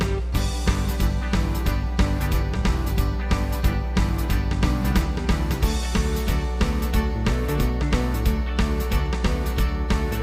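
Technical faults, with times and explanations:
Throughout, mains hum: a steady 60 Hz tone with low harmonics sits at roughly the same level as the wanted sound, pointing to a ground loop or nearby transformer.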